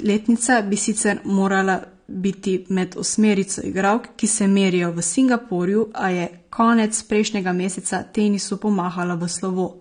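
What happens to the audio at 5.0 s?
AAC compression, present throughout including 5.0 s: the speech sounds dull and smeared, with nothing above 9.7 kHz, likely from coarse, low-bitrate spectral quantisation.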